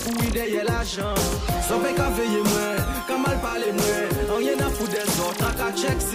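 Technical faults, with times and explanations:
3.49 to 3.53 s, repeated frames: a brief stutter as a 40 ms stretch of sound plays once more immediately after itself. A short run of compressed frames, which fits two frames, was written or sent twice, so the decoder replayed it and the audio grew 40 ms longer.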